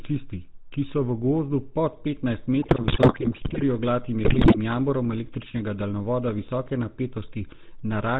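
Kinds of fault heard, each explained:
GSM full-rate codec: Present throughout the speech, this coder models the vocal tract, excites it with regularly spaced pulses that keep only every third excitation sample, and passes nothing above 4 kHz. The result is a plainly audible buzzy, gravelly roughness, consistent with the 13 kbit/s GSM full-rate codec.
GSM bit errors: From 2.62 to 3.63 s and again from 4.24 to 4.57 s, corrupted bits reach the decoder and distort its filter, pitch and gain values frame by frame. The speech breaks into squawks, pops and gargling, pointing to roughly 4.1 and 5.3 percent of bits flipped.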